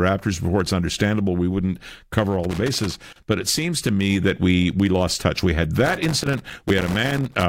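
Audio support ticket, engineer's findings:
Loose connector crackle, 2.44–3.23 s, between "understandable we wouldn't cover" and "but it seems to": irregular scratchy bursts chop the speech. Probable worn or dirty cable/jack contact making and breaking as it moves.

Repeat episode at 5.86–7.43 s, longer, same gritty crackle. Distinct from digital dropout clicks: the bursts are randomly spaced and rough-textured rather than periodic and clean-edged. Reseat or replace the connector.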